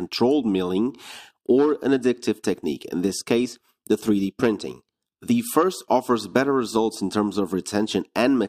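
No technical faults can be heard anywhere in the recording.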